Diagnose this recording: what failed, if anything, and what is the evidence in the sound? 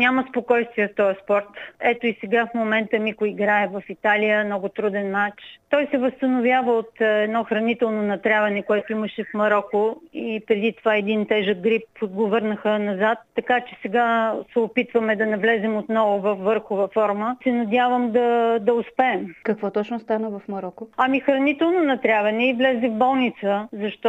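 Nothing failed here: I can't hear any dropout, glitch or other defect anywhere in the recording, so there's nothing to pin on any stage of the chain.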